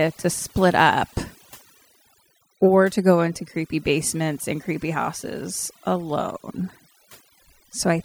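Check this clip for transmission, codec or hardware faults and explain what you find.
Overdone noise removal runs through the whole speech clip, from start to finish. A noise reducer has been pushed too hard: each frequency band that sits close to its noise estimate is pulled far down or shut off entirely, and the softer parts of the voice fall below that threshold along with the noise. The pauses drop to near silence sprinkled with twinkling specks.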